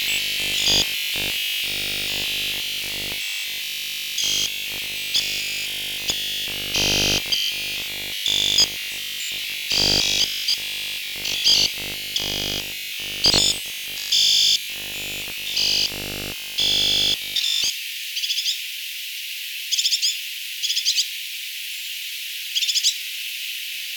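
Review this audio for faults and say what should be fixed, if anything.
Robotic sound from repeated short buffers runs from 0.02 s to 17.7 s. The audio is replaced almost entirely by a rigid, metallic buzz at 50 Hz, which fits a 20 ms block being looped. The likely cause is audio arriving too seldom, so playback keeps repeating the last block. To prevent it, enlarge the jitter or playback buffer and fix the starved input path.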